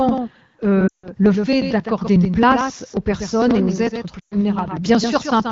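Doubled audio track runs through the whole clip: a second full-band copy of the speech trails the original by roughly 150 ms, only around 5 dB quieter, with no decay or room colour. This is likely a second capture path or an edit holding two copies out of step.

Periodic USB or driver dropouts start at 0.09 s and continue to 5.40 s, repeating every 0.09 s. Something blocks the audio bus or driver at a fixed interval, and each time roughly 10 ms of sound is skipped outright, giving a steady train of ticks wherever signal is present.

Lost AMR speech frames cause a 160 ms gap from 0.87 s to 1.08 s. The decoder, fed frames that failed their checksum, keeps repeating the last good pitch and vocal tract settings at falling gain, so the sound drops to near silence within two frames before the speech returns weak and rough for a moment.

Lost AMR speech frames hit again from 4.19 s to 4.35 s, a 120 ms stretch concealed the same way: a quick drop to near silence, then a rough recovery. 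The underlying wideband coding is clear, with speech coded up to about 6.4 kHz and shaped noise filling to 7 kHz, which fits AMR-WB at 12.65 kbit/s.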